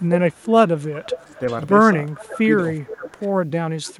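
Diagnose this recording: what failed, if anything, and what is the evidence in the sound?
Echo leak in call processing: a discrete speech copy about 0.39–0.41 s late, about 15–25 dB down, at 0.00–1.57, 2.09–3.05 and 3.84–3.94 s, likely from a far-end canceller's residual, not diffuse room reverberation.

Speech suppressed in double talk, also call processing: the level dips up to about 20 dB at 1.26–1.42, 2.20–2.46, 2.85–3.22 and 3.93–3.98 s, overlapping the echo. These are likely canceller gain cuts, not total network dropouts.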